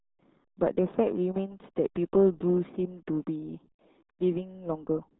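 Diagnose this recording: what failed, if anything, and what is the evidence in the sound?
Codec stage: heavy RealAudio 14.4 coding throughout. The speech is muffled and gargly, and the spectrogram is blank above 3.8 kHz, which fits an 8 kbit/s dial-up codec.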